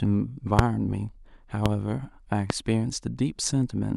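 Loud pops occur at 0.59–0.62 s, 1.66–1.68 s and 2.50–2.53 s. Each is a single sharp burst of roughly 25 ms, the first peaking about 25 dB above the speech and the other two about 20 dB above it. The speech carries on underneath. A sudden electrical spike, likely from a switch, plug, static discharge or driver glitch, was added to the signal, and the following circuitry turned it into a brief, hard transient.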